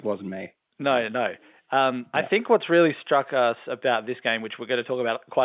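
No technical faults occur at any point in the speech, which carries the narrow, telephone-band sound of G.711 coding.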